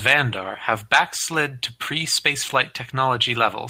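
At 0.37 to 0.51 s, just before "have backslid to", lost packets were rebuilt from error correction. At 2.57 to 2.63 s it happens again. Low-bitrate backup copies fill the gap. Those stretches sound rougher and noisier, with no silence.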